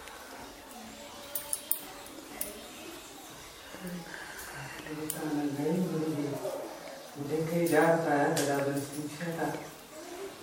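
Nothing goes wrong anywhere in this recording, so there's no technical fault to point to at any moment.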